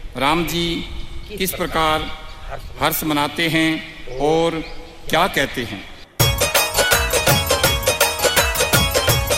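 No technical faults can be heard anywhere in the recording; the signal stays steady and intact throughout.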